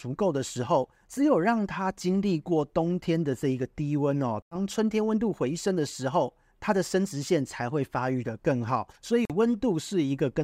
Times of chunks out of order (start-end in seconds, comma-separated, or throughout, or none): none